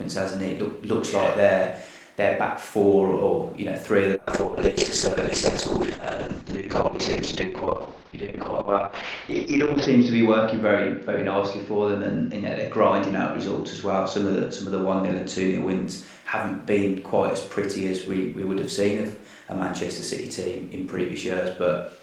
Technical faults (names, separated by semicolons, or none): call bitrate drop